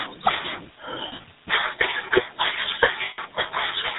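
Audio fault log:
Throughout, GSM full-rate codec: a buzzy, gravelly roughness with nothing above 4 kHz, consistent with roughly 13 kbps, from pulse-driven vocal-tract modelling rather than plain band-limiting.
1.08–1.26 s and 3.04–3.19 s, lost GSM frames: the sound freezes into a rough metallic ring as the last good frame repeats. The first loss totals 100 ms in short bursts of up to about 40 ms spread over 160 ms. The second is one 140 ms gap. This held ring is what separates it from a clean dropout.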